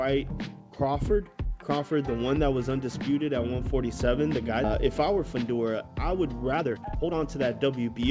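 Skip ahead at 4.64 s: playback leaps forward, dropping roughly one and a half seconds of audio. That stretch was lost in transit or discarded by the jitter buffer while later audio was already queued, so the receiver simply resumed from the newer material. Nothing fills the hole. The sound on either side of the cut is butted together with no audible gap, giving an abrupt, seamless-sounding jump rather than a silence.

Jitter buffer speed-up from 4.82 to 7.99 s: the audio runs at about 119% of normal speed while keeping its original pitch. After the jump the buffer was holding more audio than its target, so the receiver repeatedly trimmed out short slices, each one or a few pitch periods long, to bring latency down. Around 0.7 s is shaved off across this span, making the sound hurried. The call path's band limit at 8 kHz stays audible throughout, which fits a G.722 codec.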